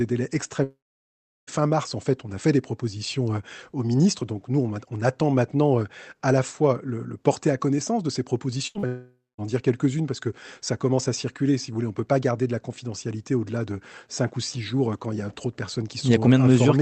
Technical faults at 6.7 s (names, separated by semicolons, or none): none